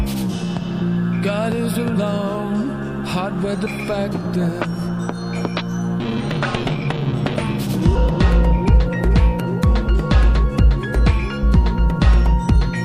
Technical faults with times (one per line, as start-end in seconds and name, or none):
6.00 compressed frames skipped
7.95 compressed frames skipped